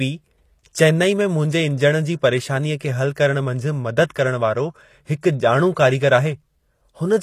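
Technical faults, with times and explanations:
throughout HE-AAC compression: The speech has likely been through HE-AAC at a low bitrate, which fits about 24 kbps. Only the lower spectrum is coded properly. The treble is regenerated by copying lower bands upward under a coarse envelope, so the upper range sounds synthetic. Its harmonics don't line up with those below the crossover, giving a plainly audible gritty, metallic edge. Nothing is present above 14.9 kHz.
4.14 s pre-echo: A sharp attack lands late in a transform block. The codec spreads its quantisation noise across the whole block, at a level sized for the loud onset, so that noise also fills the quiet moment just before it. The result is a brief hiss running ahead of the attack by about 14 ms, which blurs the onset and makes it sound softened and smeared rather than crisp.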